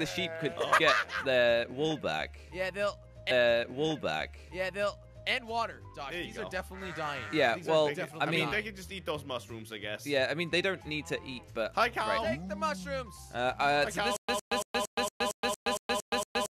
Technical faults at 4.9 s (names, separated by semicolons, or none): stream segment repeated